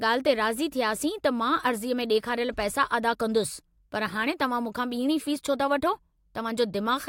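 No technical faults can be heard anywhere in the speech recording.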